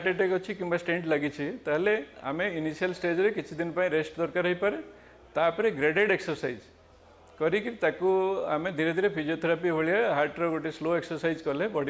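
Nothing stood out as a technical fault on listening to this audio.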